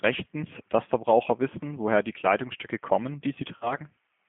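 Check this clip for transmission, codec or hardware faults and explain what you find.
Yes, two faults are present. Throughout, the G.729 codec rebuilds the speech from a filter model and sparse pulses. Nothing above 3.5 kHz survives, and the voice sounds plainly rough. From 3.57 to 3.76 s, there is VoIP packet loss concealed by the speech codec. The decoder stretches a 40 ms gap into a fading buzzy tone or coloured noise, then recovers weakly.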